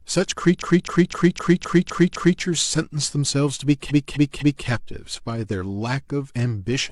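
Repeated frames: a 256 ms block of compressed speech was sent again and again, so the decoder replays the same stretch as a rhythmic stutter. From 0.58 to 2.37 s it repeats seven extra times, adding 1.79 s; from 3.86 to 4.63 s, three extra times, adding 0.77 s.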